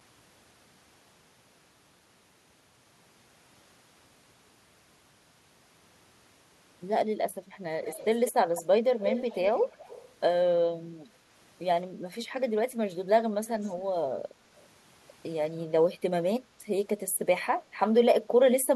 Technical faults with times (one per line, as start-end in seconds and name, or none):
7.84-8.62 echo leak
9.00-10.09 echo leak
13.46-13.71 echo leak
17.34-17.46 echo leak